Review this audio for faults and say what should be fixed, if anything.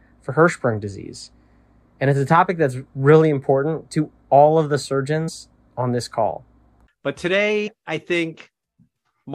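Compressed frames skipped: the decoder lost or rejected frames at 5.27 to 5.30 s and 7.66 to 7.68 s, so the speech jumps ahead about 50 ms. To prevent it, check file integrity and use error-resilient transport so damaged frames are retransmitted or concealed.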